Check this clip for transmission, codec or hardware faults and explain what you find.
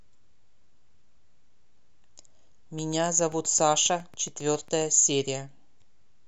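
A train of clicks runs from 2.79 to 4.83 s, about 7.4 per second at a regular spacing, roughly fifteen in all. A repeating pulse, likely interference from nearby equipment or a faulty connection, ticks through the speech and its pauses, peaking at roughly the speech's level.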